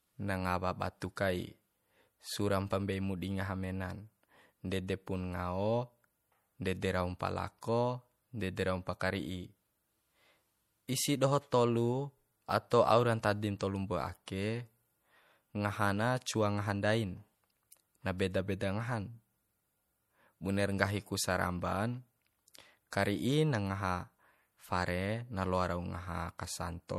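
Watery, swirling artefacts run through this speech recording, with a smeared, metallic edge. The likely cause is MP3 compression at a low bitrate, consistent with about 64 kbps. At 1.16 s a brief hiss of about 12 ms comes just before a sharp attack and softens it. This is pre-echo: the codec's quantisation noise spreads across the whole block, into the quiet moment before the onset.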